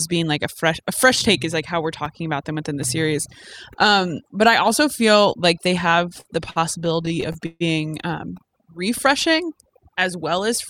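Across the whole speech clip, overdone noise removal is audible. The reduction was set so hard that any frequency band sitting near the estimated noise level is pushed down or shut off, and the softer parts of the voice go with it. Pauses fall to near silence sprinkled with twinkling specks. Unlike a low-bitrate codec's smearing, the artefacts track the noise floor and are heaviest where the speech is quietest.

From 6.09 to 7.62 s the sound turns to repeated stalls (stutter). Packets arrived late or too slowly, so the jitter buffer ran dry 16 times in that stretch. Each time the receiver stretched the last fragment until data came in again, with the longest hold lasting about 146 ms. Roughly a quarter of that span is this filler, yet nothing is actually lost. The speech drags and hiccups rather than dropping out, which separates it from packet loss, where pieces vanish.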